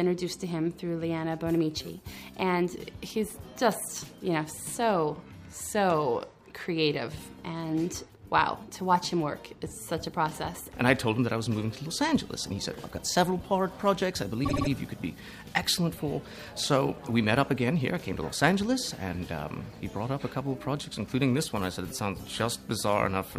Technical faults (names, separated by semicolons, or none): repeated frames